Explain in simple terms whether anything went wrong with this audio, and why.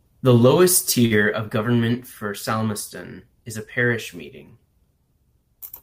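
Around 1.05 to 1.13 s, just before "of government for", there's a short stall from a late packet. A chunk of audio showed up late, so the player stretched the last sound for about 50 ms to fill the gap, then carried on. Nothing's lost; it just drags briefly.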